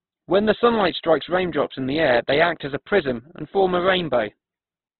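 Speech clip with heavy Opus compression damage throughout: rough, grainy texture and nothing above 4.2 kHz, likely from a very low bitrate around 12 kbps.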